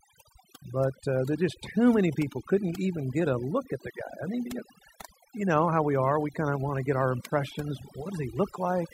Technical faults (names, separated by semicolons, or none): overdone noise removal